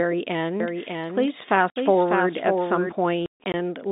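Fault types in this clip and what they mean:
Doubled audio track: from 0.60 to 2.92 s a full-band copy of the speech runs about 0.7 s behind and roughly 5 dB quieter, likely a slower capture path. A spectrogram shows the same pattern repeated and shifted right, starting and stopping abruptly.
Packet loss filled with silence: lost packets were replaced by silence, leaving a 60 ms hole at 1.70 s and 180 ms of gaps across 3.26–3.54 s, fitting 20 ms packets. The waveform shows flat runs; the spectrogram shows blank vertical stripes with hard edges.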